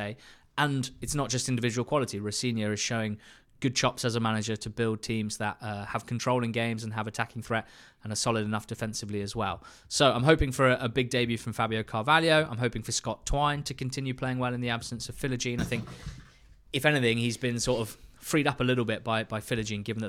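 No audible technical faults occur anywhere in this recording.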